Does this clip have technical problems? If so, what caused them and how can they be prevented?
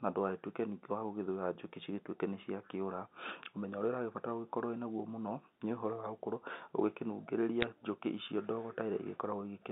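Yes. From 7.61 to 7.64 s, a brief burst of sharp ticks and crackle sits over the speech, which itself stays intact and band-limited to roughly 200 Hz to 3.7 kHz, as on an ordinary G.711 mu-law phone line. These are bit errors on a digital phone line. A small fraction of bits, around a fifth of a percent, flipped in transit. Each flip corrupts a single logarithmic sample, and hits on the sign or top bits produce the loudest clicks. Error-checked, properly clocked digital links prevent this.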